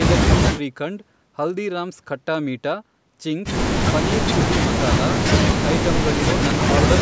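No technical faults can be heard in the speech. It has passed through a call's microphone processing, which trims away the lowest bass and leaves nothing above 8 kHz.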